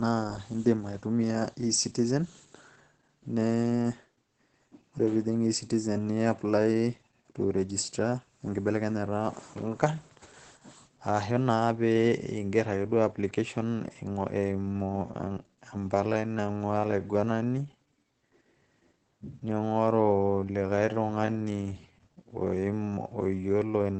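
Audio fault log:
throughout: Opus voice compression. The coder is running in its SILK linear-prediction mode at a bitrate that sounds like about 12 kbps, coding the excitation coarsely in 20 ms frames and cutting the band to wideband, so nothing above 8.6 kHz remains. The speech sounds muffled, hoarse and slightly robotic, with the damage plainly audible.
14.44 s to the end: time-stretched section. Software likely slowed this stretch to about 0.68 times its original speed, repeating short pieces to hold the pitch steady. The pace drops abruptly while the pitch stays the same, and the speech drags.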